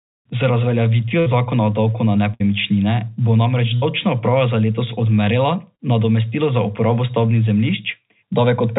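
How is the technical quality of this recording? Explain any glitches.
The recording has four packet-loss dropouts over narrowband telephone-quality speech. The band stops at 4 kHz, consistent with a G.711 mu-law call path at 64 kbps.

Three bursts of packet loss occur at 1.20–1.28 s (just before "zakona o davku na"), 2.34–2.42 s (just after "zakona o davku na"), and 3.76–3.84 s. In each, about 60 ms went missing. The receiver extended and faded the last sound, leaving a held buzz or hiss before the speech jumps ahead.

A short concealed packet loss at 5.76–5.81 s, just before "nadomestilo za uporabo stavbnih", lost about 40 ms. About 30 ms of synthesized continuation fills it, heard as a brief smear.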